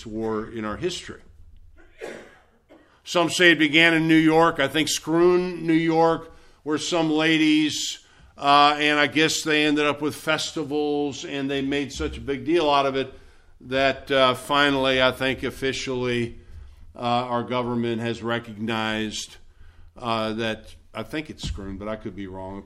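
Nothing here calls for comment: listening all the way along, there's no glitch, dropout or odd artefact to point to at any moment.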